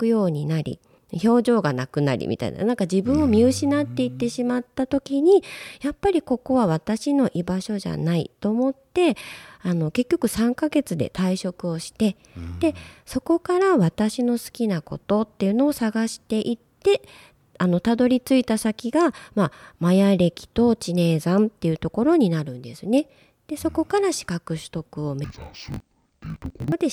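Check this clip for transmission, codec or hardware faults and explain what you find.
One fault is present, near the end of the speech.

Interleaved audio read as planar, from 25.24 to 26.73 s: each 20 ms block of alternating left-right samples is split into halves and treated as separate channels, so both play at half speed. The speech drops an octave and turns dull and robotic, buzzing at 50 Hz.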